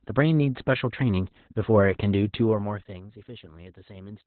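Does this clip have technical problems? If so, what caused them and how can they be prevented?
Yes. Throughout, the speech has heavy Opus voice compression damage: the coder's SILK linear-prediction mode has coarsely quantised the excitation and narrowed the band, leaving it muffled, hoarse and slightly robotic, which points to a very low bitrate around 8 kbps. On a spectrogram, energy stops at a flat ceiling near 4.4 kHz, with nothing above it. To prevent it, encode at a higher bitrate so the codec keeps a wider band and finer detail.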